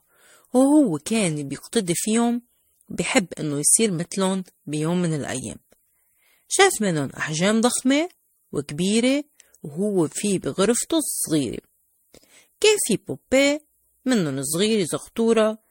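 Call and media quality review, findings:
Speech swirly, smeared and hollow throughout, attacks blurred, nothing above 16.6 kHz. Generation loss, likely repeated MP3 transcoding, around seven passes near 64 kbit/s; each re-encode quantises on a shifted frame grid, stacking noise and spectral holes.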